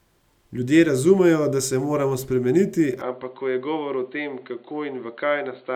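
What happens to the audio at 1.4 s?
Nothing goes wrong at 1.4 s; the audio plays through that moment intact, with no dropout, click or distortion.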